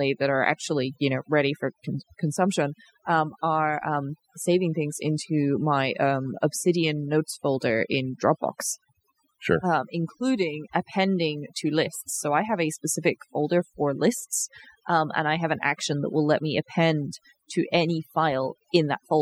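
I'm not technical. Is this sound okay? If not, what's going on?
No. Throughout the recording, the quiet gaps drop away and break up into twinkling, warbling specks. That is overdone noise removal: a cleanup tool set too strong, erasing background noise along with softer parts of the voice.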